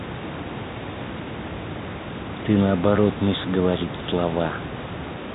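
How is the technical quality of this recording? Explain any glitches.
No glitches to report: the speech comes through telephone-band coding consistent with G.711, with nothing above 3.8 kHz, and a room noise sitting about 14 dB under the speech.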